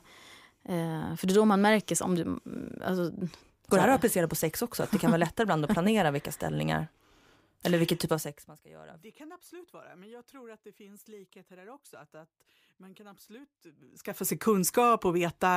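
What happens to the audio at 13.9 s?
At 13.9 s you're in the middle of a burst of zipper noise running from about 13.76 to 14.35 s. The speech level shifts by roughly 25 dB in unsmoothed steps of about 2 dB, around 30 a second, and each jump clicks, so you hear a fast ticking zip riding on the level change.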